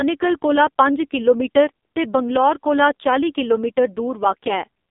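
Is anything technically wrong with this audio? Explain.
Yes. AMR narrowband mobile codec damage runs through the whole clip. Nothing passes above 3.7 kHz, and little below 250 Hz. The codec rebuilds speech from a vocal-tract model fed by sparse pulses. Heavy damage makes it buzzy and synthetic, which fits a low mode near 5.9 kbps.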